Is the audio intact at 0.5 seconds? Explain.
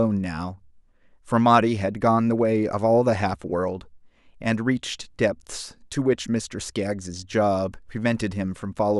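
Yes, the speech at 0.5 seconds is intact, with no fault present at that moment.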